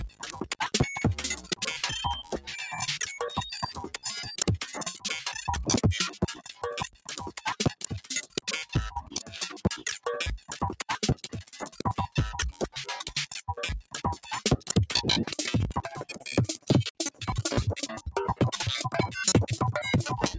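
Everyday sounds here, passed through a call's microphone chain (everything above 8 kHz is gone). A noise suppressor applied to music or sounds is working throughout, with a level swing of roughly 10 dB, because it treats steady tones and tails as noise. You'll hear sound cut by the noise suppressor at 0.09–0.56, 1.37–1.59, 2.23–2.48, 6.2–8.49, 9.04–9.34, 10.38–13.12, 13.82–14.72 and 16.18–17.23 s. In each stretch, held and decaying parts sink by up to about 16 dB or get chopped short.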